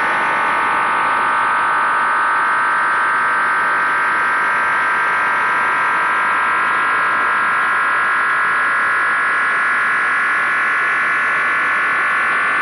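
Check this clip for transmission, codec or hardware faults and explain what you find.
There's one hardware fault, running the whole way through. A switching supply whistle sits near 10 kHz, wandering between 9.42 and 10.28 kHz about 30 dB below the sound, from a power supply cycling in an audible burst mode or beating with another supply.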